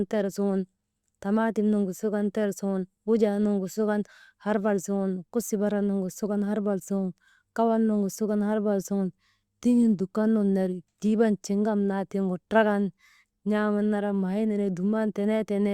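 Speech recording; no technical faults are audible anywhere.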